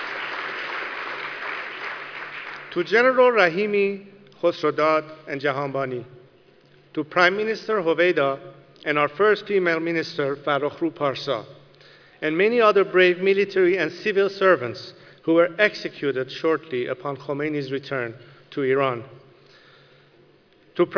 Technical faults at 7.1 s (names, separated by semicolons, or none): none